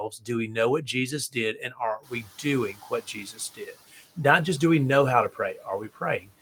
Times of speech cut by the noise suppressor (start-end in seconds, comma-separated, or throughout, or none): 0.10-4.18, 5.33-6.31